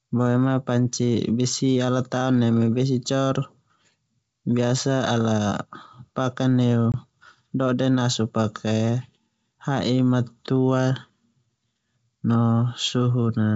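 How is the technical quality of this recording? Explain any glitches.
The recording has one audible glitch, on a G.722 wideband call whose faint upper-band hiss sits around it. At 6.92 to 6.94 s there is packet loss on an ADPCM call. About 20 ms of data, which fits a single lost packet, was dropped and filled with silence. The receiving decoder's adaptive predictor and step size then no longer matched the sender's. The result is a hard-edged gap in the speech, followed by slightly distorted speech as the decoder resynchronises within tens of milliseconds.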